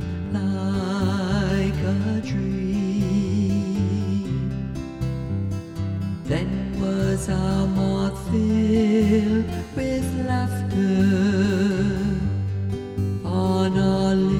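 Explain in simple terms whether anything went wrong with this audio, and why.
Nothing went wrong here.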